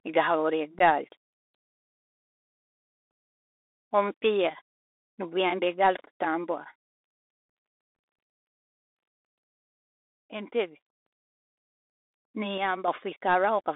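From start to finish the speech sounds thin, scratchy and grainy, with hiss beneath it and nothing above about 3.7 kHz. This is the Bluetooth CVSD headset codec, whose one-bit adaptive steps, consistent with a 64 kbps link, can't follow loud high detail.

At 0.79 to 0.81 s a hole of about 15 ms opens abruptly. This is unconcealed Bluetooth headset packet loss: a couple of voice packets went missing and nothing filled the gap.

From 1.55 to 3.11 s, and again from 9.49 to 11.06 s, the level suddenly falls by about 6 dB and then recovers. The likely cause is one channel dropping out, leaving the mono sum at half level.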